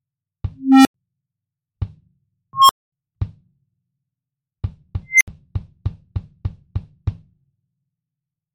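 A tone swells to a clipped squeal, then drops to silence, three times: near 300 Hz at 0.58 to 0.94 s, near 1 kHz at 2.53 to 2.92 s, near 2 kHz at 5.09 to 5.28 s. Each is an unstable filter: bad coefficients let the recursive feedback grow, overflow, and mute until reset.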